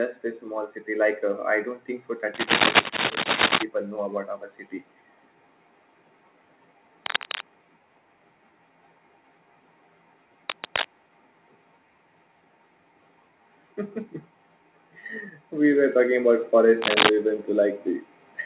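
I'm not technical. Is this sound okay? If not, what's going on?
No. From about 15.49 to 16.53 seconds there is automatic gain rising: the volume control built into the call decided things were too quiet and turned them up over roughly a second. Unlike someone simply leaning closer, the background noise swells along with the voice.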